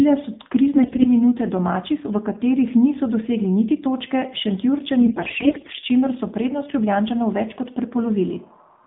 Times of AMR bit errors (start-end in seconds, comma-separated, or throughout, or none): 0.76-1.10, 5.00-5.79